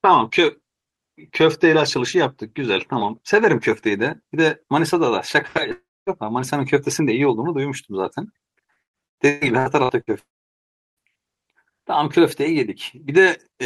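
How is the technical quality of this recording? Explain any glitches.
The recording has clear transmission damage in three places, from two kinds of fault.

From 5.71 to 6.10 s and again from 10.19 to 11.05 s there are long network dropouts, likely from audio failing to arrive. The receiver stretches the last sound into a fading buzz, then leaves silence, about 0.24 s and 0.72 s. On the waveform these show as flat gaps, and on the spectrogram as blank columns.

Between 8.71 and 10.10 s, repeated packet loss produces eight short holes, the longest 122 ms, with about 42% of the span patched over. The constant patching sounds choppy, with pieces missing, and the spectrogram shows smeared, repeated bands broken by gaps.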